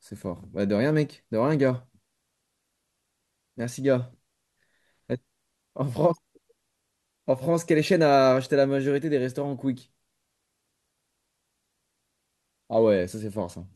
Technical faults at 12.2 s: none

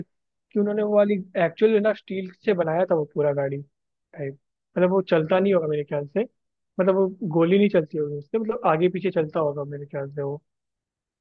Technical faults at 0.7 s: none

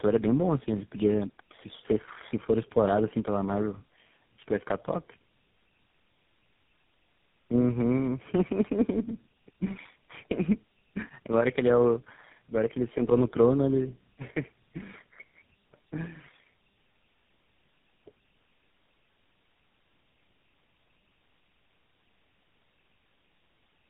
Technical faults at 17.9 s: tandem speech coding

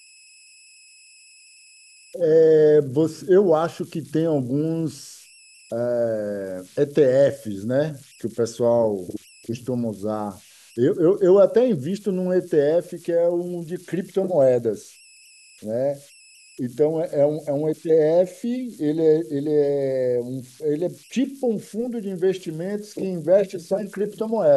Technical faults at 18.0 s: converter idle tones

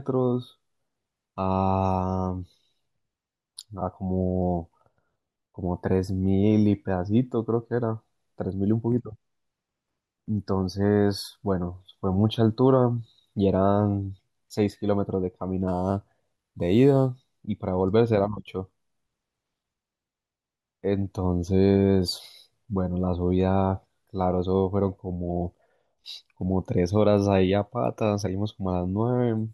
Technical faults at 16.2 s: crude rate conversion

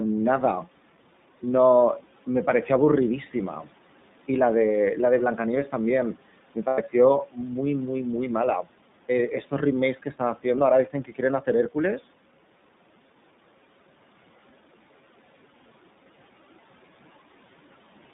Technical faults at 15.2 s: iLBC codec

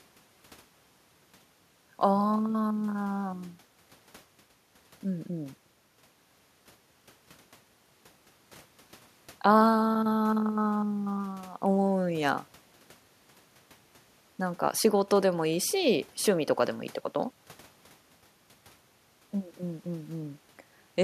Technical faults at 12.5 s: none

